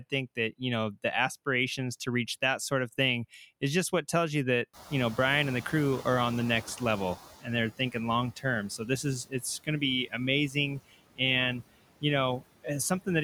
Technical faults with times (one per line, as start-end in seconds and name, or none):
0.00-13.24 noise suppressor artifacts
4.73-7.25 noise suppressor catching up
9.25-9.43 speech cut by the noise suppressor